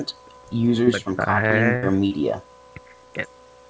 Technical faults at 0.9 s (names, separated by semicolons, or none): short concealed packet loss